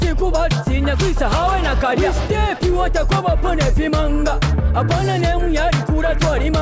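No faults found; the audio comes through a call path whose content stops at 8 kHz, consistent with a wideband codec such as G.722.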